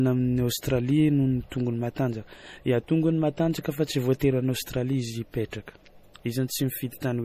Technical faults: MP3 compression; pre-echo

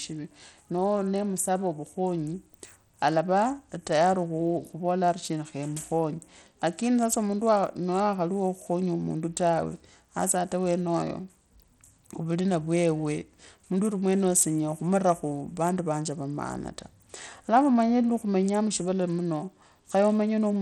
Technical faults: Bluetooth SBC compression

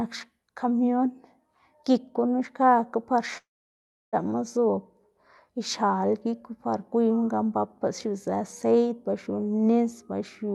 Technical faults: long network dropout

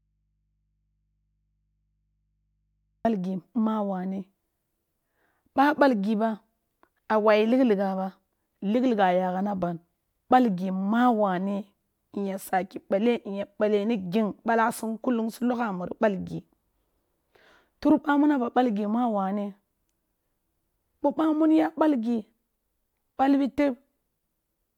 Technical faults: audio dropout to a faint residue

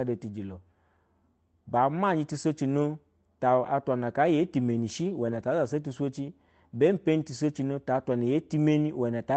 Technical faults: lost packet rebuilt from error correction

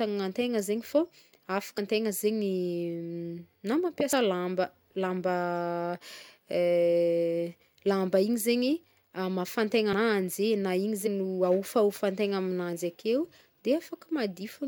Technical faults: compressed frames skipped

